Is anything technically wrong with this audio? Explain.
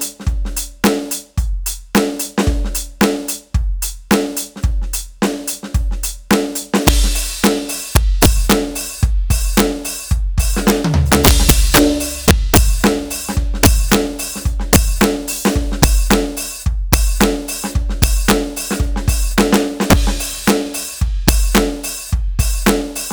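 Yes. Integer overflow runs throughout the music: the gain pushes peaks about 9 dB past full scale, and instead of limiting, those samples wrap to the opposite sign. Under one percent of samples are affected, but each produces a violent crack, far harsher than clipping.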